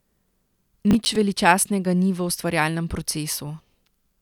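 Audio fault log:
0.91–1.16 s: processor overload crackle, a quarter-second of gritty tearing over the speech as several short buffers, each around 10 ms, miss their deadline and replay stale audio with hard edges; unlike a single dropout, it's a clustered burst that stops once the load eases.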